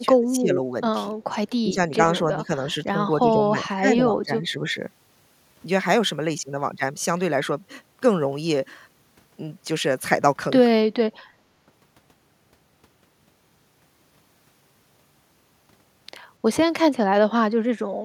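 Speech suppressed in double talk dips the talker at 0.0–0.6 s, 1.14–1.18 s, 1.62–1.92 s, 2.24–2.49 s and 3.2–4.76 s, by up to about 20 dB. It is likely the echo canceller mistaking the talker's speech, overlapping far-end sound, for echo. The level sags and recovers rather than cutting to silence like a packet dropout.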